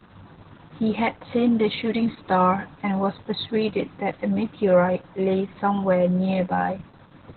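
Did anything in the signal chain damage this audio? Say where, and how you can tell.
Yes, at the codec stage, for the whole clip: this is Opus voice compression at a very low rate. The speech has nothing above about 4.3 kHz, so it sounds boxy and muffled, with a hoarse, slightly robotic texture. That narrowband cutoff and coarse excitation point to Opus running its SILK linear-prediction coder at around 8 kbps, where it discards the upper band and models the voice source too crudely to stay natural.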